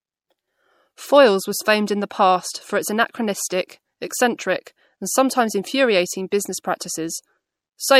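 Throughout, s sounds swirl. Short of bits, the encoder drops weak frequency detail. This is likely MP3 compression, fitting 64 kbps.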